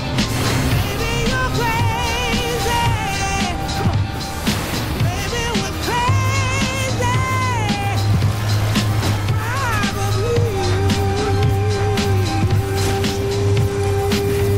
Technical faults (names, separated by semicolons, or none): none